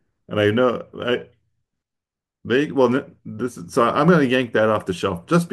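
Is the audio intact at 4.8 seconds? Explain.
Yes, the audio is intact at 4.8 seconds, with no dropout, click, distortion or other fault to be heard at that point.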